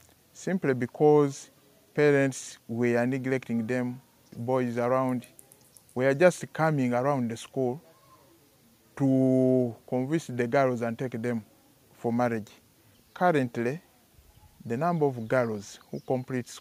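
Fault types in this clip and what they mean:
No fault types show up in this clip.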